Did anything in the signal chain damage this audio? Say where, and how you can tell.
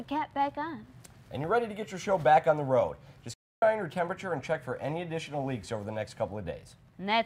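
Yes. At 3.34 s the sound stops dead in mid-flow and stays silent until 3.62 s, a gap of about 0.28 s, before carrying on. The cut is abrupt rather than a fade. This is a playback stall at the playback stage: the player likely ran short of data or had its output thread blocked, so it fed silence until it could resume.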